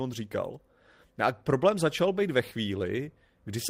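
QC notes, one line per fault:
Nothing to flag on this one, as no technical faults turn up anywhere in the speech.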